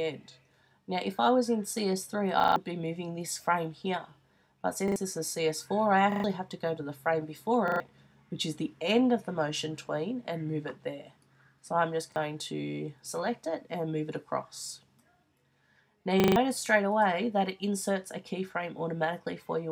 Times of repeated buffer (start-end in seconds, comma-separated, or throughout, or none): 2.40-2.56, 4.88-4.96, 6.12-6.24, 7.68-7.80, 12.12-12.16, 16.20-16.36